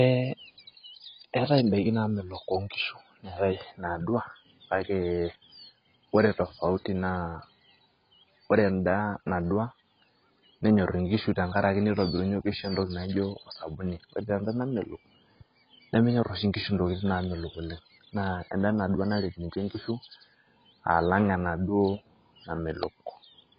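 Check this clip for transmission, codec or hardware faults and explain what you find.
One codec fault runs through the whole speech clip. From start to finish nothing sounds above 5.1 kHz, and sibilants and sustained vowels warble and smear. That is heavy damage, likely from AAC compression, and fits AAC-LC at a bitrate near 16 kbps. Unlike a plain low-pass filter, the coder also starves bands below the cut-off, leaving fizzy, shifting artefacts.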